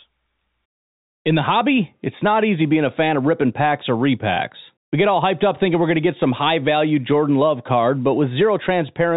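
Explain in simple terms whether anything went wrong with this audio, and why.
Nothing went wrong here.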